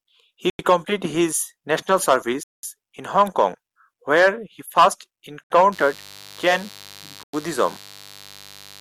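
The speech drops abruptly to silence four times: at 0.50 s for 92 ms, at 2.43 s for 200 ms, at 5.44 s for 66 ms, and at 7.23 s for 99 ms. Each gap is a clean cut with no fade, and the audio resumes just as suddenly. These are Bluetooth stalls, likely caused by radio interference that delayed packets until the headphones' buffer emptied and playback paused until the retransmitted packets arrived.

From 5.72 s to the end, a steady, raspy buzz sits under the speech, around 25 dB below it. This is mains buzz built on a 50 Hz fundamental. Sharp switching spikes, from something like a dimmer or rectifier or an unshielded path, get into the signal twice per mains cycle. That produces a dense series of 50 Hz harmonics reaching into the kHz range, which gives the sound its gritty edge rather than a smooth hum. The stall at 7.23 s falls inside this stretch.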